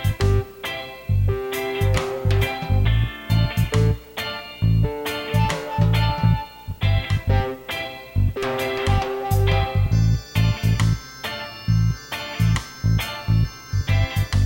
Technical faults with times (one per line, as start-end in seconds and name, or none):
0.00-14.45 video or display buzz